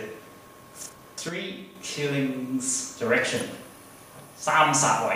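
From 1.29 to 1.75 s the sound drops abruptly by about 6 dB, likely one channel dropping out. The waveform steps down and the spectrogram dims evenly.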